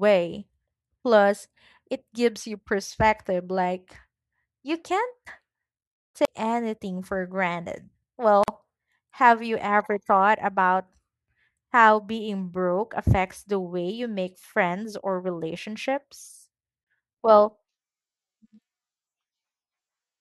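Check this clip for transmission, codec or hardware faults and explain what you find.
Three faults are audible in this speech clip: two CD skips and one gap at a join of encoded pieces.

CD skip, at 6.25 to 6.28 s (just before "anything for granted") and at 16.84 to 16.87 s (just after "make friends or relationships"). A jolt or a flaw in the disc throws the laser onto a neighbouring turn of the spiral. The player mutes for roughly 30 ms and resumes from a different point in the recording. What sets it apart from a join gap is that the speech does not carry on where it stopped. It jumps, so part of the flow is lost or repeated.

Gap at a join of encoded pieces, at 8.44 to 8.48 s, right after "anything for granted". This audio was encoded in separate pieces and then butted together without trimming. The start-up delay of one encoder run and the padded final frame of the other both survive as a silence of 45 ms. 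Its edges are smeared by the codec. Unlike a CD skip, the speech resumes at exactly the point where it broke off, with nothing missing or repeated.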